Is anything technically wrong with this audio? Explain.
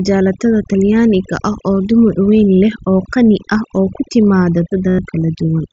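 Yes, there are two faults in this speech.

Overdone noise removal runs throughout: an over-aggressive reducer pulls bands near the noise estimate down, leaving near-silent, twinkling gaps.

Concealed Bluetooth headset packet loss occurs from 4.89 to 4.99 s. About 98 ms of lost packets were filled by repeating recent waveform, producing a held buzzy tone and a warble on recovery.

The band-limited, faintly grainy character of the mSBC headset link can also be heard.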